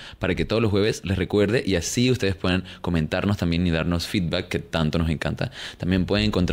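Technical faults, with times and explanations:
No technical fault can be heard in the speech. There is nothing here that needs a time or an explanation.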